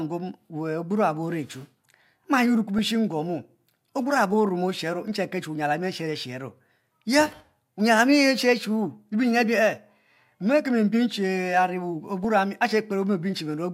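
At 2.78 s the speech is hit by DAB burbling. It is a brief burst of burbling over the programme. Weak reception let bit errors slip past the error correction into the MP2 data. Corrupted samples put short noise blips in single sub-bands, which fits a handful of damaged frames at a low error rate. At 12.24 s it returns over slightly more frames, which points to a higher error rate.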